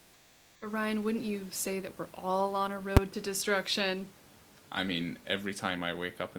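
From 0 to 0.61 s the background is a steady, featureless hiss about 6 dB quieter than the room noise that follows. This is comfort noise in place of the background, likely from discontinuous transmission such as Opus DTX. On a spectrogram it appears as smooth, uniform texture with no fine detail.

At 2.97 s, between "we're all on a" and "to destruction I mean", invalid numbers at full scale produce a single loud bang lasting about 6 ms, which fits a 256-sample processing block. On the waveform it shows as a brief slab pinned at one extreme value, far beyond the speech peaks, and on the spectrogram as a bright vertical stripe across all frequencies.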